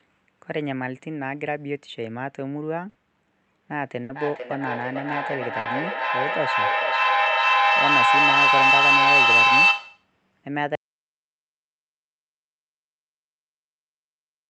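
Three times in this speech recording, at 2.89, 4.03 and 5.59 s, a burst of packet loss on the call link left the receiver without audio for about 60 ms. Each time it filled roughly 60 ms by stretching the last sound and letting it fade into a short buzz or hiss. Then it jumped ahead, so about 60 ms of speech is simply missing at each point. From 3.7 s to 10.17 s a feedback howl runs underneath. A second device in the same room was picking up its own loudspeaker, so each trip round the microphone-to-speaker loop added gain instead of losing it. The repeats narrow into a piercing tone around 3 kHz that swells, with a loop delay of about half a second. At its peak it sits about 10 dB above the speech until the loop is broken. At 10.75 s the audio drops out to silence and stays that way to the end of the clip. It is plain silence with no room tone, so the input was likely lost through a disconnected device, a failed link or a mute, and the recorder kept writing nothing. 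The Opus call path itself shows in its usual coding noise and a top end that stops at 8 kHz.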